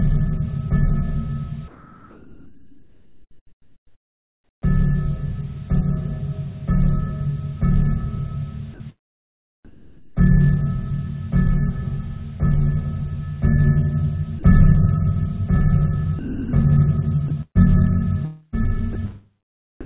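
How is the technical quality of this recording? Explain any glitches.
The recording has repeated gating glitches. The background is swapped for flat noise, and brief bits of sound vanish. Everything sits in a narrow band with nothing above 4 kHz, as a narrowband call path like G.711 produces.

From 1.68 to 4.62 s, and again from 9.65 to 10.17 s, the background loses its texture and turns into a smooth, featureless hiss, about 9 dB and about 5 dB quieter respectively. This is likely comfort noise in place of the background: transmission paused during apparent silence, and the receiver synthesised rough filler.

Short gaps at 8.74 s (60 ms), 14.39 s (40 ms) and 19.81 s (43 ms) briefly replace the sound with steady noise before it returns. This is likely sound dropped by the voice detector, which mistook these moments for background and stopped sending them.

Between 16.19 and 18.95 s, the sound breaks up repeatedly, with about 0.79 s in total replaced. 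This is likely sound chopped by the voice detector, switching transmission on and off several times across the passage.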